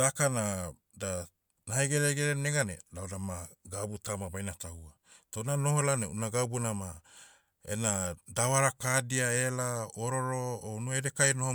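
Nothing technical stands out in this short speech recording; it comes across as an ordinary, intact take with no audible faults to point to.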